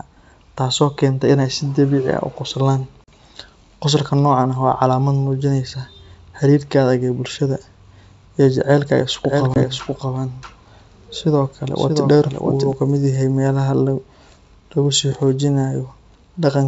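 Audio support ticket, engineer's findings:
Packet loss on the ADPCM call at 3.04 s and 9.54 s. Silent gaps of 40 ms and 20 ms, which fits two packets, then one. Decoder predictor falls out of step, so speech returns slightly distorted after each hole.

Doubled audio track, 9.25 to 12.73 s. Full-band copy trails by roughly 0.7 s, about 5 dB down, dry, with an abrupt start and stop. Likely a second, slower capture path.

G.722 wideband coding at 64 kbit/s, faint upper-band hiss.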